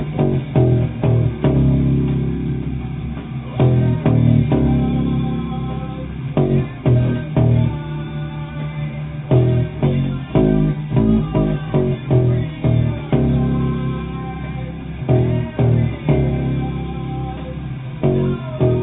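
No technical faults occur at any point in the audio, which has nothing above 4 kHz, consistent with a G.711 A-law call path.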